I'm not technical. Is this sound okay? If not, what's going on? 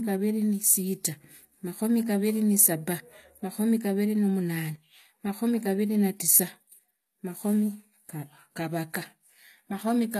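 No. The speech has a gritty, metallic edge on s sounds for the whole clip, and nothing above about 14.9 kHz. This is likely HE-AAC compression: the treble is rebuilt by copying lower frequencies upward rather than kept, so it doesn't match the real sound.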